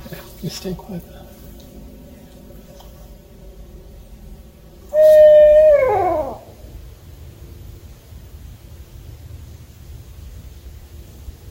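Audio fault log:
0.0 to 5.79 s, channel delay (comb filtering): one channel arrives late by roughly 5 ms, and the two are then summed to mono. Whatever both channels share cancels wherever the offset puts them in opposite phase, which carves fixed notches starting near 100 Hz and repeating about every 200 Hz above it. The sound turns hollow and phasey for this stretch.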